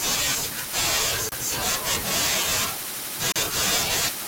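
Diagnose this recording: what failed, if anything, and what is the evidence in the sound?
The speech falls silent twice, from 1.29 to 1.32 s (about 29 ms) and from 3.32 to 3.36 s (about 38 ms), two seconds apart. These are gaps at joins of encoded pieces, a codec-stage failure. Separately encoded two-second segments were concatenated with each encoder's start-up delay and final-frame padding left in. The edges are smeared by the codec. Unlike a network dropout, the speech resumes exactly where it stopped with nothing lost, and the gaps fall on a fixed two-second grid.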